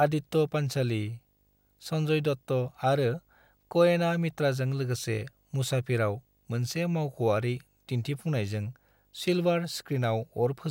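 Video or display buzz runs throughout this speech clip, a 50 Hz field-rate buzz with hash and a faint 15.6 kHz line tone, roughly 40 dB down, coupled in from a screen or video cable.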